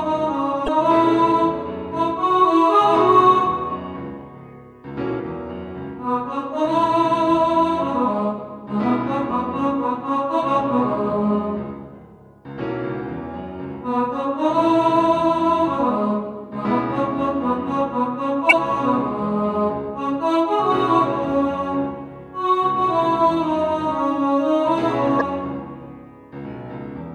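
Damaged data in a compressed stream corrupts five spots in this audio. Where the stored or transmitted bytes were lost or overwritten, the decoder misreads the affected frames, loses its place in the stream and hunts for the next valid frame header before decoding resumes. Each event is a brief chirp or blip: at 0.64 to 0.69 s, at 5.19 s, at 9.29 s, at 18.49 to 18.53 s, and at 25.17 to 25.22 s.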